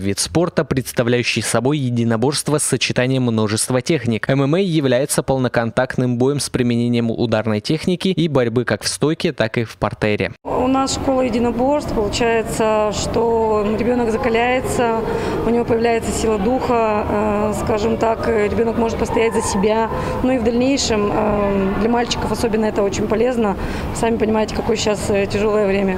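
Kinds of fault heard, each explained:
No technical fault can be heard anywhere in the audio. Nothing in the recording calls for a fault to be listed here.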